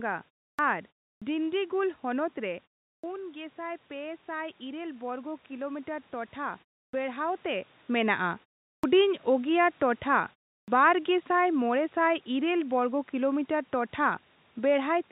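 At 0.53 s and again at 1.16 s, speech resumes with its onset missing. This is a clipped start after a pause. The output device drops into a low-power or unlocked state during the short gaps of about 0.3 s, and roughly 56 ms of sound passes before it is ready again. The first sounds are lost, so syllables begin abruptly out of silence rather than building in.

From 2.39 s to 7.28 s, automatic gain rising is audible. Around 2.5 s the talker moves away and the level at the microphone falls by about 9 dB. The gain control responds by pushing its gain up by about 6 dB over nearly five seconds. The slow swell lifts voice and room noise together, so the background audibly grows along with the speech.

The same clipped start after a pause recurs at 2.98 s, 6.87 s, 8.77 s and 10.62 s, each after a gap of 0.3 to 0.4 s. Between 55 and 65 ms of each onset is swallowed, giving the same chopped, abrupt word beginnings heard earlier.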